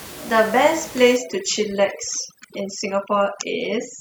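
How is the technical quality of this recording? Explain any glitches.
The recording suffers from overdone noise removal from 1.17 s to the end. An over-aggressive denoiser strips bands near its noise estimate, leaving twinkling near-silence between words, while room noise sits about 19 dB below the speech.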